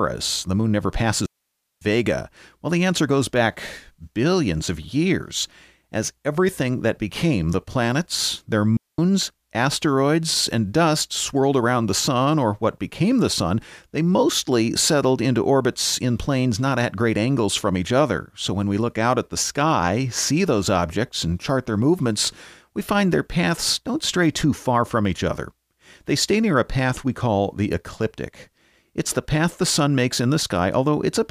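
At 1.26 s and again at 8.77 s, digital wireless dropouts mute the speech cleanly for about 0.56 s and 0.22 s. The receiver mutes on lost data, leaving near silence without the noise bursts of analogue dropouts.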